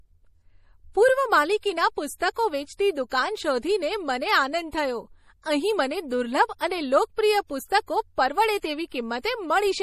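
Throughout, the encoder is short of bits, likely from MP3 compression at a rate that fits roughly 40 kbps. It drops everything above 15 kHz and lets weak frequency lines flicker between frames, so the speech sounds dull, watery and swirly, with metallic chirps on s sounds.

From 6.59 to 6.61 s, a sharp attack lands late in a transform block, and the quantisation noise meant for the loud part spreads back into the quiet before it. This pre-echo appears as a brief hiss of about 20 ms just ahead of the onset, which sounds softened and smeared.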